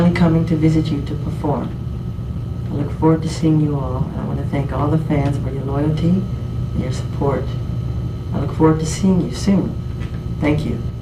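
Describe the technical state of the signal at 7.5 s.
At 7.5 s the signal is still inside a call bitrate drop running from 1.47 to 7.99 s. The sound is rough, watery and dulled at the top, which fits the encoder falling from about 128 kbps to around 21 kbps. The coarser coding smears the texture continuously, with no gaps or clicks like packet loss.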